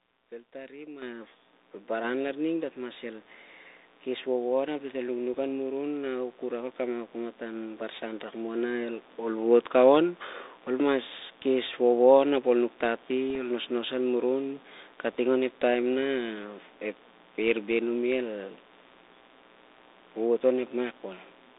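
Speech carried over a G.726 ADPCM link, band-limited to roughly 300 Hz to 3.7 kHz with a light coding hiss that fits 32 kbit/s, has a steady, raspy mains buzz underneath it for the full length. The buzz is built on 60 Hz and sits roughly 30 dB below the speech. Its harmonics climb well into the kilohertz range, the signature of sharp switching spikes from a dimmer, rectifier or poor shielding entering twice per mains cycle. The microphone volume is stepped up twice, at 1.02 s by 8 dB and at 2.04 s by a further 3 dB. Voice and background rise together instantly, which points to the call software judging the input too quiet and raising the device gain in single jumps rather than ramping it. Bit errors on the ADPCM link produce short pops and rough bursts from 5.34 to 5.41 s, 13.30 to 13.36 s and 15.13 to 15.16 s, each with a brief level wobble. A flipped bit corrupts not just one sample but the decoder's adaptive step size and predictor, so the disturbance rings on for some milliseconds until the decoder resettles.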